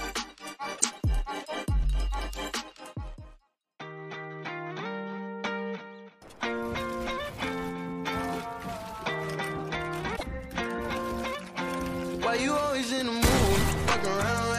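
Damaged data in a compressed stream strikes twice, from 0.75 to 0.84 s and from 10.15 to 10.23 s. Corrupted bytes there make the decoder misread frames and lose sync while hunting for the next header, so each spot breaks into a brief chirp, squawk, click or short hole.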